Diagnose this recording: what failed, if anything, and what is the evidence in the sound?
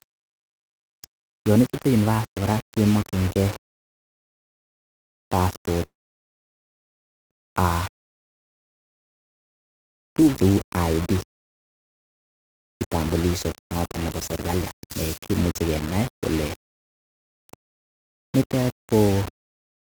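The speech was likely requantised to about 5 bits at the sample-format conversion, rounded without dither. Throughout the clip the error tracks the signal, leaving a grainy distortion only about 15 dB below the speech that roughens quiet syllables and changes with the sound.

On the network side, packets stopped arriving from 5.85 to 7.35 s, a long network dropout, likely caused by a stall in transmission. The receiver filled the gap, and nearly all of it plays as silence. The speech then resumes with roughly a second of audio lost.

The jitter buffer then held about half a second more than its target, so it performed a jitter buffer speed-up from 7.36 to 13.15 s. It trimmed short pitch-period pieces repeatedly, and the speech runs at about 108% speed at unchanged pitch, sounding hurried.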